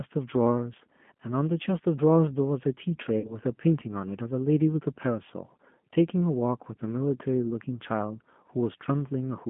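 G.729 codec damage runs through the whole clip. The speech is confined to roughly 150 Hz to 3.4 kHz and rebuilt from a vocal tract filter, a pitch predictor and sparse pulses, giving a plainly rough, synthetic edge consistent with an 8 kbit/s G.729A stream.

VoIP packet loss concealed by the speech codec affects 3.20 to 3.40 s. About 40 ms of audio went missing, which fits two lost 20 ms packets. The decoder stretched its last pitch and filter, lowering the gain as it went, and the speech stays weak or distorted until 3.40 s.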